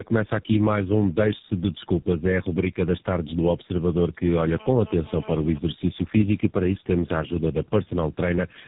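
Throughout, tandem speech coding: three codecs, each re-coding the previous one's output, make the speech rough, muffled and warbly; the spectrogram is empty above 3.8 kHz.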